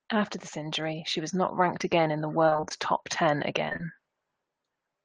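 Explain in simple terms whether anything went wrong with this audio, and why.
From 0.1 to about 3.6 s there is automatic gain rising: the level control judged the input too quiet and slowly turned it up. The voice and the background noise get louder together over those three and a half seconds, instead of jumping at once.

Between 2.45 and 2.72 s there is repeated packet loss, which makes the sound robotic. Pieces of the stream kept getting lost or arriving too late, in several gaps of up to 26 ms each. The receiver filled each gap by stretching the last sound. About half of that quarter-second is patched-in audio, so it comes out choppy and machine-like.

There is also short concealed packet loss three times in quick succession, at 3.69, 3.73 and 3.76 s. Each time about 20 ms of audio went missing and was covered by continuing the sound just before it. The first patch also adds a few milliseconds. 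Together they give a brief smear or wobble there.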